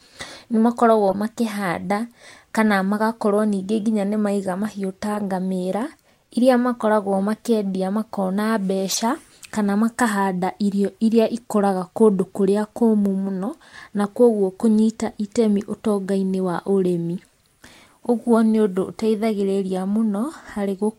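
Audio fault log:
1.10–1.15 s, 2.27–2.30 s, 5.13–5.19 s, 8.91–8.97 s, 18.03 s: corrupt frame decoded. Brief chirps and noise blips are loudest near 8.9 s, just before "kana makahanda irio", and barely audible at 18.03 s. Damaged compressed frames were decoded anyway, spraying energy at wrong frequencies for one to three frame lengths.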